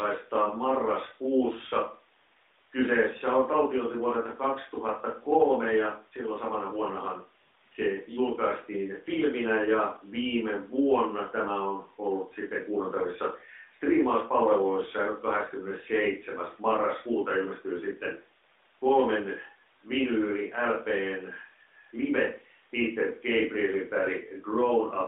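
No technical faults are audible in this speech recording.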